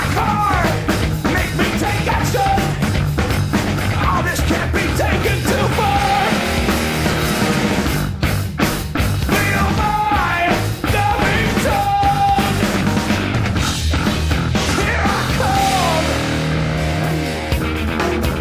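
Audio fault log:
No faults detected anywhere in the audio.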